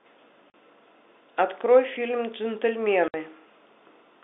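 A speech clip on a narrow telephone line (roughly 250 Hz to 3.6 kHz, with G.711 coding) that has two cases of packet loss filled with silence: hard-edged dropouts at 0.50 to 0.54 s and 3.08 to 3.14 s, 40 and 60 ms long, which fits lost 20 ms packets.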